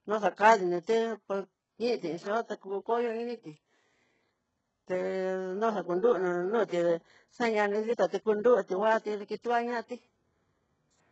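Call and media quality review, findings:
HE-AAC compression, whole clip. Speech treble synthetic and gritty, s sounds metallic, no content above 8 kHz. Likely HE-AAC at a very low bitrate, around 8 kbps: upper band rebuilt by copying lower bands upward, harmonics misaligned at the crossover. Heavy damage.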